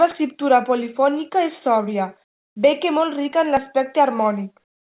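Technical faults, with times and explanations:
2.24–2.56 s: comfort noise in place of the background. After "escriptura polifònica és sòbria" and before "bé que molt rica", the room tone gives way to steady, featureless hiss about 24 dB quieter for 0.32 s, likely from discontinuous transmission muting the pause and the receiver synthesising shaped noise.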